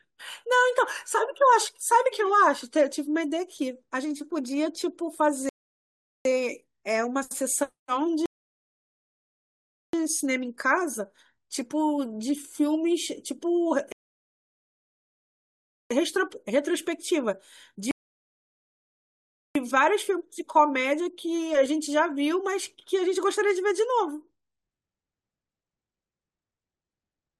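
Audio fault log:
5.49–6.25 s, 8.26–9.93 s, 13.92–15.91 s, 17.91–19.55 s: rebuffering stall. Playback drained its downloaded audio and froze, inserting gaps of about 0.76, 1.68, 1.98 and 1.64 s of flat silence before the speech resumed exactly where it stopped. The waveform shows flat-line gaps, and the spectrogram shows empty vertical bands with nothing skipped either side.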